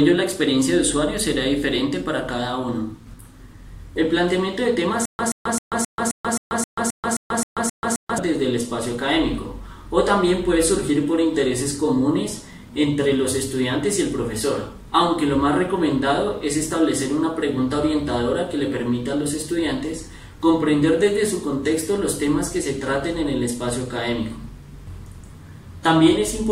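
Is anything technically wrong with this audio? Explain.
Yes. From 5.05 to 8.18 s, a stutter with silent gaps. A 128 ms burst of sound repeats 12 times. Each repeat is followed by 136 ms of silence, one cycle every 264 ms. A stalled player replaying its last fragment is the likely cause. The audio meant for that span is lost.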